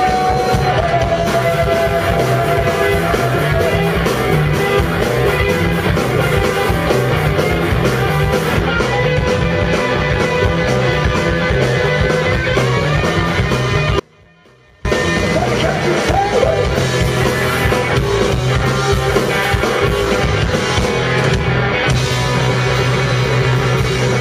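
At 14.00 s the sound drops abruptly to a faint residue, roughly 30 dB below normal, and snaps back at 14.85 s, about 0.85 s later. This audio dropout likely came from a brief signal loss while the downstream path stayed live. Unlike a pause or fade, there's no taper, and unlike true silence, a weak leak remains.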